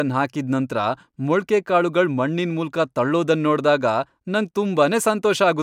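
No technical faults can be heard anywhere in the speech. There is nothing to mark at any point in the recording.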